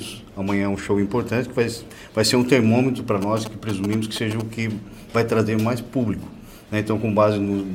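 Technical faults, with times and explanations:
3.22–4.42 s, GSM signalling bursts: a galloping dit-dit-dit of short 217 Hz buzzes, roughly 10 dB below the main sound. A nearby 2G phone sent brief groups of radio bursts while signalling, and the audio circuitry rectified them into audible pulses.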